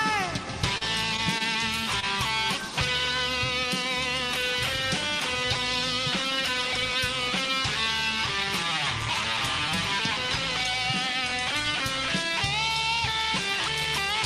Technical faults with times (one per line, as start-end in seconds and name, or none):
0.77-0.83 short concealed packet loss
1.38-1.42 short stall from a late packet
2.00-2.04 short concealed packet loss